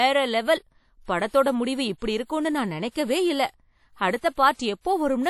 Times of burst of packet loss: none

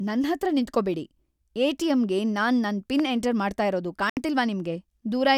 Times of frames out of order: none

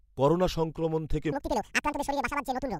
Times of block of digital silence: none

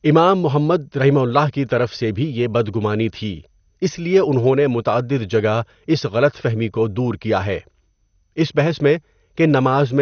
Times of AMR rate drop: none

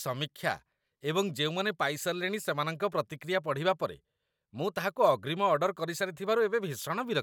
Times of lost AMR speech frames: none

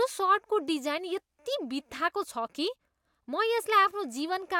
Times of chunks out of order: none

